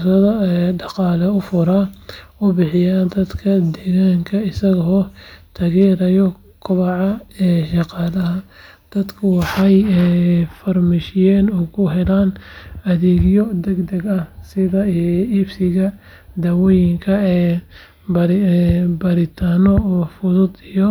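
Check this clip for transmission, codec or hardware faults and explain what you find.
Hard clipping shows up twice in this speech, briefly each time. From 5.81 to 5.85 s a peak drives roughly 1 dB past the level some stage can pass, and from 9.72 to 9.77 s another just reaches that ceiling. The converter or number format cannot represent anything larger, so the waveform tops are sliced flat. Those squared edges add high harmonics, heard as a short crackle or rasp on the loudest moments rather than sustained fuzz.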